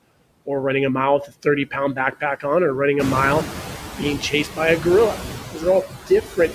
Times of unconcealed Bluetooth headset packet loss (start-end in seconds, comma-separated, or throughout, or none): none